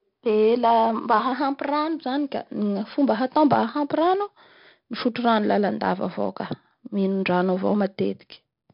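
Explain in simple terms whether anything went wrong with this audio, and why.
The speech has 4-bit ADPCM compression from start to finish. Each sample is saved as a small, coarse step from a guess, so loud passages carry a gritty hiss and sharp attacks distort. Nothing above 5.3 kHz survives, which makes everything sound dull.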